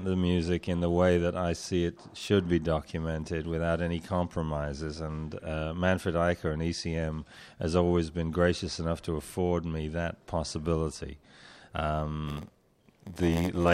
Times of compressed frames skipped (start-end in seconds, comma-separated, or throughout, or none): none